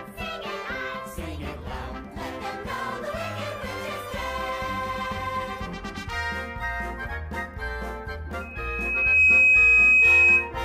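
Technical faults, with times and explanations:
8.41–10.53 s, loudspeaker feedback squeal: the microphone-speaker loop exceeds unity gain at 2.5 kHz, so a single tone swells within about a second into a squeal roughly 15 dB above the audio.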